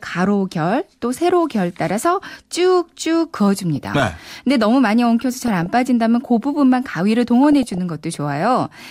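Weak DAB reception lets bit errors, at a rate of a few tenths of a percent, slip past error correction into the MP2 data of this speech recording. Corrupted samples put short noise blips in single sub-bands and corrupted scale factors make sub-bands jump in level for up to a frame, producing DAB burbling over the speech at 3.76–4.28 s, 5.37–5.66 s and 7.44–7.78 s.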